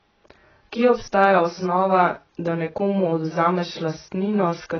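From start to finish the speech is dull and smeared, with a warbling, fizzy texture on sustained sounds and sibilants, likely AAC compression at a very low bitrate, around 12 kbps. A spectrogram shows nothing above 6.7 kHz.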